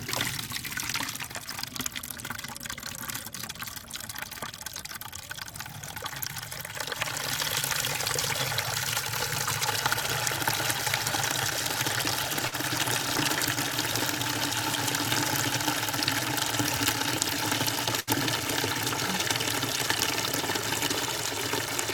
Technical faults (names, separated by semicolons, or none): short concealed packet loss; burst of packet loss